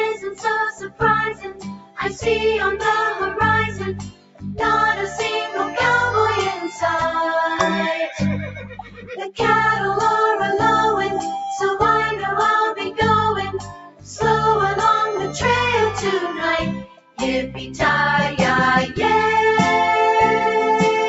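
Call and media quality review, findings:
Pumping, fluttering level through the whole clip, with held tones and tails sinking while attacks get through, a swing of roughly 10 dB. Noise suppressor applied to music or sounds: a speech-tuned suppressor in the call chain treats sustained content and ambience as noise and attenuates it.

Sound cut by the noise suppressor: distinct dips where sustained or decaying sound drops out at 0.14–0.45, 0.72–1.02, 1.32–2.25, 3.99–4.55, 8.47–9.15, 13.55–14.2, 16.79–17.2 and 17.5–17.8 s. The deepest dips are about 18 dB and the shallowest about 7 dB. The suppressor's gain clamps down harder on these passages, cutting decays short. Top end stops at 8 kHz from the call path bandwidth.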